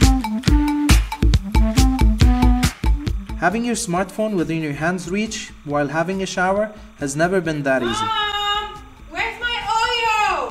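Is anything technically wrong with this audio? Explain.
Yes. Timecode bleed runs through the whole clip: linear timecode leaking in from an adjacent track or cable. Its square wave flips between tones around 1 and 2 kHz, at a rate consistent with 30-frame code, and sits roughly 35 dB under the audio as a constant chirping warble.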